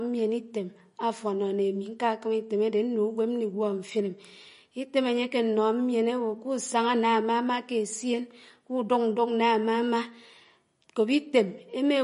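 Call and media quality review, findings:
Throughout the speech, plainly audible watery, swirling texture on sibilants and smeared onsets, with nothing above 10.5 kHz. Likely MP3 compression at a low bitrate, roughly 40 kbps: the starved encoder drops the top band and zeroes weak frequency lines, which flicker on and off frame to frame. A simple low-pass filter would dull the highs cleanly, without the shifting metallic chirps heard here.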